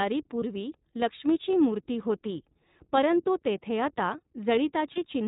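Speech that sounds band-limited, slightly rough and synthetic throughout, with nothing above 4 kHz and plainly audible coding damage. This is the iLBC codec, a narrowband VoIP coder that codes each frame's excitation independently. The texture fits its 15.2 kbps mode with 20 ms frames. Two brief, buzzy held-vowel blips interrupt it, at 0.40 to 0.43 s just before "लक्ष्मीची मूर्ती होती परंतु" and at 4.95 to 4.98 s. Each is a lost iLBC frame of about 20 ms, which fits a single dropped packet. The decoder filled the gap by repeating the last pitch cycle blended with noise, and the voice returns cleanly straight after because iLBC frames do not depend on earlier ones.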